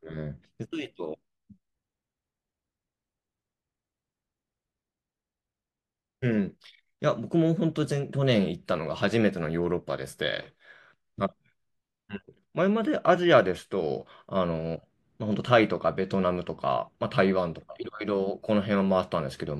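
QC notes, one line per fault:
No faults found in this speech clip. Nothing in it calls for a timed entry.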